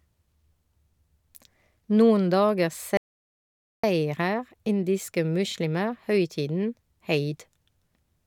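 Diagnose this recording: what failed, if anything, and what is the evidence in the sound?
An audio dropout to silence cuts the speech at 2.97 s and resumes it mid-flow at 3.83 s, losing about 0.86 s. The gap is silent with no room tone or concealment fill, unlike a noise gate, so the likely cause is input loss while recording continued.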